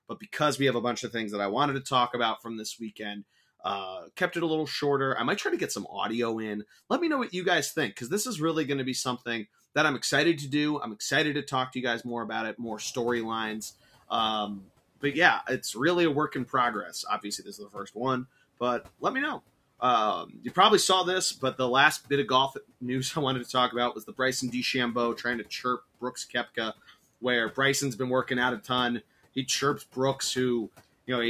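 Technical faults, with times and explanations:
17.22 to 17.96 s and 20.26 to 20.57 s: speech cut by the noise suppressor. After "a work in progress" and before "saw this but the", brief stretches totalling roughly a fifth and a tenth of a second sink by about 13 dB and about 9 dB. The suppressor mistook quiet speech for the room noise that rose near 12.5 s, so the sound is swallowed rather than cut off cleanly as in a dropout.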